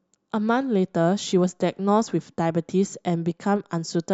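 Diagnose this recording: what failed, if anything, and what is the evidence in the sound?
A block of digital silence interrupts the speech at about 1.32 s. The stage is the driver or buffer. The gap lasts about 1.33 ms, so it is heard as a single tick, not a hole. The audio drops straight to silence and returns with no fade. The length fits a 64-sample buffer that was likely left unfilled when the program missed its deadline.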